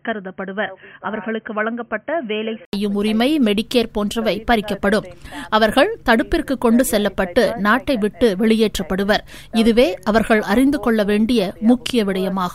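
From the start to 2.73 s the sound is dull and boxy, with nothing above 3.2 kHz, a level a few decibels lower (around 5 dB), and a faint background hiss of its own. This points to a likely input switched to a poorer device, one passing a narrower band. At 2.73 s an 80 ms silence breaks the sound before full bandwidth returns. On a spectrogram the top is cut flat at 3.2 kHz up to a blank gap, then fills out; the waveform grows slightly taller after it.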